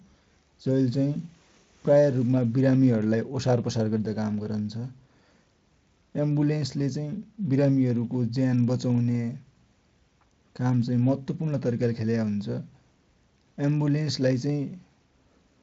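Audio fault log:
Nothing stood out on listening to this speech recording.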